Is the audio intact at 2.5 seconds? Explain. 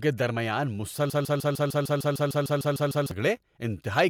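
No. At 2.5 seconds the speech is caught in a broken-record loop running from about 1.10 to 3.11 s. A fragment of roughly 150 ms repeats exactly, back to back, about thirteen times, likely because the player or stream stalled and kept resending the last piece it held. It sounds like a rapid mechanical stutter, and the speech that belonged in that stretch is gone. A waveform or spectrogram shows identical blocks tiled at a 151 ms period.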